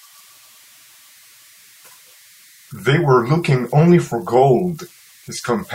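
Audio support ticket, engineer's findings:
Converter idle tones throughout speech clip. Faint tone around 2 kHz in pauses, grainy noise under quiet passages, about 32 dB below signal. Probable component: undithered delta-sigma ADC/DAC. Small input drives modulator into repeating bit patterns, producing offset-dependent tones.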